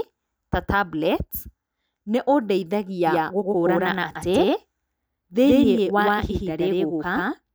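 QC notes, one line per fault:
3.07 s to end, doubled audio track: from 3.07 s a second copy of the speech enters abruptly and runs to the end of the clip, trailing the original by about 100 ms at roughly equal loudness. Because the copy is full-band with no decay or room colour, it sounds like a hard slapback stutter rather than an echo. This likely comes from the signal being captured twice, once through a slower path.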